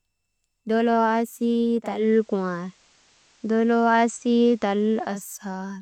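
Speech, with digital radio blending to analogue FM from 1.79 to 5.36 s: a 339 ms cross-fade brings in hiss roughly 35 dB down and about 1 dB level shift.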